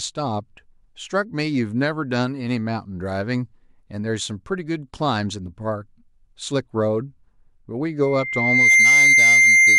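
Speech, and near the end it picks up a loudspeaker feedback squeal. From about 8.02 s a single tone at 2.1 kHz starts swelling, taking somewhere under a second to build into a full squeal that sits roughly 10 dB above the speech and runs right to the end of the clip. That's the mic hearing its own loudspeaker, with the loop gain topping one at 2.1 kHz so that frequency just feeds on itself.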